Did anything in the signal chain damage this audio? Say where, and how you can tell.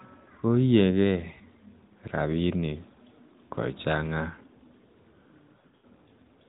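Yes. Radio errors caused lost AMR speech frames, from 5.56 to 5.86 s. About 200 ms of speech drops out in patches over 280 ms, which fits roughly ten 20 ms frames. In the longest 80 ms gap, the decoder repeats stale settings, so the speech smears, fades and returns rough.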